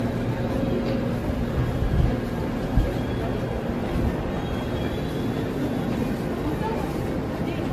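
Throughout, swirly, hollow smearing, blurred attacks and nothing above 14 kHz point to generation loss, likely about seven AAC passes, worse than one 64 kbit/s encode.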